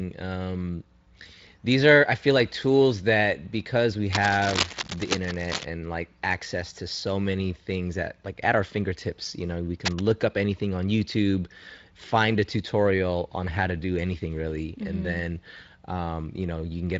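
Scratchy, rustling bursts, about as loud as the speech, cover 4.12 to 5.64 s and 9.85 to 10.02 s: cable scratch noise, likely from a worn connector shifting.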